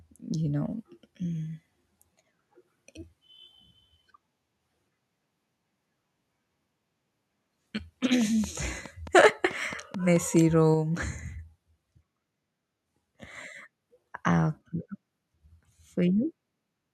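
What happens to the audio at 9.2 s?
At 9.2 s, two faults overlap. The first is a train of clicks running from 8.21 to 10.37 s. It is likely caused by interference from nearby equipment or a faulty connection or power supply, which injects a pulse into the signal at a steady rate of about 4.65 per second. The result is roughly ten similar, evenly spaced ticks. They stand out over the speech, peaking around 5 dB above it, and they stay audible through any pauses.

The second fault is microphone overload from 9.16 to 9.27 s. The input gain was likely set too high, so the loudest peaks drove the converter about 4 dB past its limit. The tops of those waveforms were sliced off, affecting a small share of the samples, a few percent. In that brief stretch the speech picks up a harsh, crackling edge that sits on top of the ongoing clicks.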